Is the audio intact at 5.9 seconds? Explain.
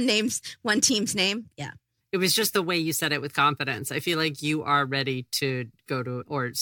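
Yes, at 5.9 seconds the speech is intact, with no audible fault at that moment.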